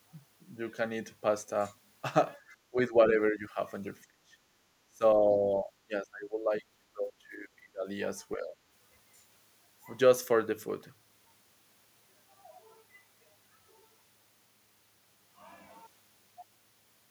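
Speech suppressed in double talk hits this speech recording at 2.7–3.59, 4.06–4.35, 4.89–5.21, 5.59–6.53, 6.94–7.87 and 8.36–8.54 s, with the level dropping by roughly 10 to 30 dB. The likely cause is an echo canceller confusing simultaneous talk with echo and attenuating the speech.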